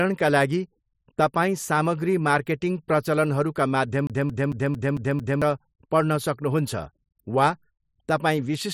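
Right after "मार्केटिङ प्रचलनहरूका", from 4.07 to 5.42 s, the speech gets a CD stuck on one turn: the same 0.22 s slice replays six times with a tiny mute at each jump. That's the laser hopping back a track every revolution, giving that quick, even skipping-disc stutter.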